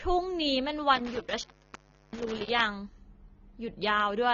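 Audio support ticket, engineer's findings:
Speech dull and smeared across the whole clip, nothing above 6.9 kHz, plainly audible warbly, fizzy texture on sibilants. Likely AAC compression (AAC-LC), which fits a low bitrate around 24 kbps: cut-off pulled down, sparse spectral bands quantised coarsely.

Dropouts with crackle at the edges between 0.96 and 2.61 s, about 0.70 s of open line in total, faint hiss in the gaps. Intermittent contact: loose cable or plug breaking the signal path momentarily, edges crackling as contact makes and breaks.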